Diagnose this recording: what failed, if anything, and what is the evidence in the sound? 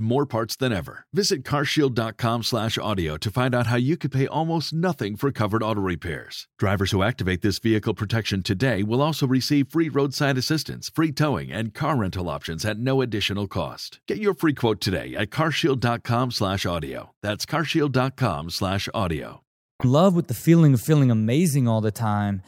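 Nothing in this speech recording points to a failure at any stage of the chain. There is no event in the sound to diagnose.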